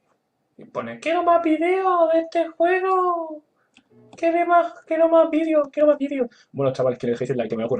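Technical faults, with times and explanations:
5.30–7.80 s, time-stretched section: from here to the end the sound suddenly runs 1.71 times faster while the pitch stays put, so it comes across rushed. That's likely software squeezing the passage to fit a length, dropping short slices to hold pitch.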